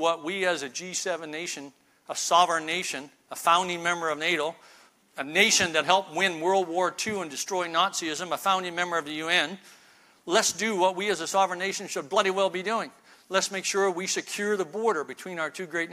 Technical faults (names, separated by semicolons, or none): none